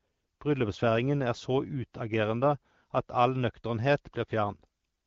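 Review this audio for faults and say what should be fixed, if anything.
Nothing needs fixing: the signal shows no technical faults, and the speech passes through the AMR wideband (HD Voice) codec at 12.65 kbit/s as intended.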